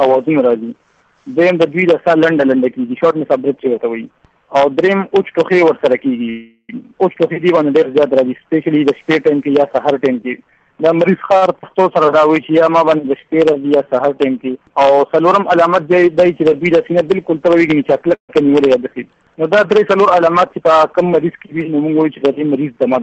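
Call audio freeze at 6.29 to 6.71 s: the sound suddenly stops moving forward, and the last moment is drawn out into a fading buzz for about 0.39 s. Only a brief 30 ms of that is true silence. Playback then resumes exactly where it left off, so nothing is lost and a gap has simply been inserted. The likely cause is that packets were held up in transit, so the jitter buffer ran dry and the receiver had to improvise. The same thing happens again at 18.15 to 18.31 s, a shorter 140 ms hold. This time most of it, about 110 ms, decays into silence before the audio picks up again.

Short stall from a late packet at 11.37 to 11.44 s: one packet missed its playout deadline. The receiver stretched the preceding sound by 48 ms while waiting, then continued from the same point. The result is a sound held slightly too long, with a faint buzzy dip, and nothing actually missing.

Skip ahead at 11.62 to 11.65 s: almost immediately afterward, playback jumps forward. 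Roughly a third of a second of audio was discarded, either dropped in transit or thrown out by the jitter buffer while later packets were already queued. The two sides are stitched together with only an 11 ms bridge, so the material on either side butts up abruptly.

Jitter buffer slow-down from 11.93 to 14.47 s: the buffer tries to rebuild its reserve. It repeats single pitch periods and slivers of pauses over and over, adding 276 ms in total. The audio runs at about 89% speed with its pitch unchanged, and sounds drawn out.

Jitter buffer speed-up at 20.27 to 20.83 s: here the buffer holds more than its target, so it trims short pitch-period pieces repeatedly, removing around 70 ms. The passage plays at about 111% speed at the same pitch and sounds hurried.

Throughout, the call path audibly cuts off everything above 8 kHz, which fits Opus at about 32 kbps.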